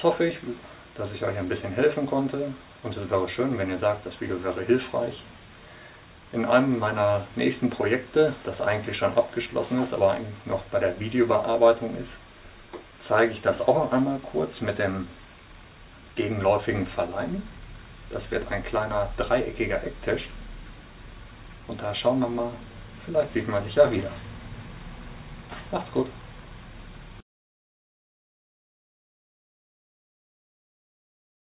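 No technical faults are audible.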